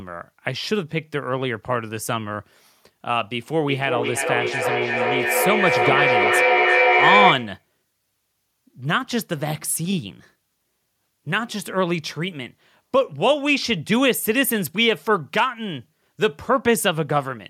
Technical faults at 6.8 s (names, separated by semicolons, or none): feedback echo between two devices